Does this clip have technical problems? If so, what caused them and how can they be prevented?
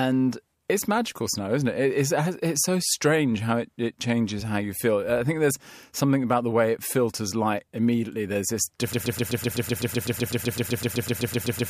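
Yes. A broken-record loop starts at 8.93 s and lasts to the end: one 127 ms fragment repeats back to back 22 times, likely from a stalled player or stream resending its last buffer. A watchdog that mutes stale buffers instead of replaying them prevents this.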